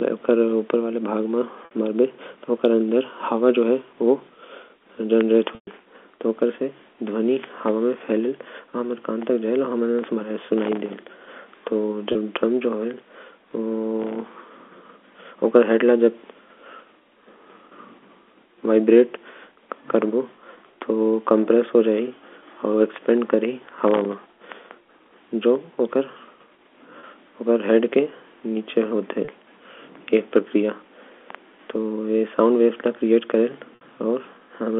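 At 1.65 s there is a 60 ms dropout bridged by packet loss with pitch repetition. The receiver loops the last pitch period, so the sound briefly holds on a slightly buzzy, frozen tone, which fits two lost 30 ms packets. The same happens at 5.55 s, but the gap runs 120 ms. The repeated cycle fades out over about 50 ms, leaving near-silence until a short cross-fade brings the speech back. Shorter 30 ms repeats follow at 12.12, 27.0 and 29.25 s, and another 60 ms one at 33.75 s. On a spectrogram each shows as evenly spaced harmonics frozen flat, then tapering. The waveform shows identical repeated cycles.

Processor overload crackle appears from 10.58 to 10.94 s, 14.00 to 14.26 s, and longest from 23.59 to 25.31 s. Here the processor misses many buffer deadlines in a row, and each miss drops a sliver of sound to silence with hard edges. The gaps point to buffers of around a millisecond and a half, with dozens missed in the first two bursts and well over a hundred in the third. 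The result is a gritty, tearing crackle riding on the speech. The waveform is peppered with tiny near-silent notches. The spectrogram shows thin vertical broadband streaks at each edge.

Throughout, the G.711 telephone coding path confines the sound to roughly 200 Hz to 3.5 kHz, with nothing visible above that band.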